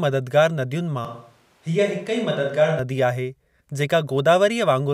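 From 1.05 to 2.79 s the speech turns abruptly roomy and hollow, with thinner bass and a faint background noise roughly 40 dB below it, though the level barely changes. This is likely a switch to a distant microphone, with the close microphone dropping out until it returns sharply.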